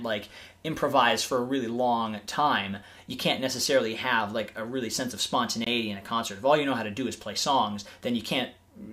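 Bluetooth stall at 5.64 to 5.67 s: sound cuts to 21 ms of silence, then resumes, likely because delayed wireless packets drained the playback buffer.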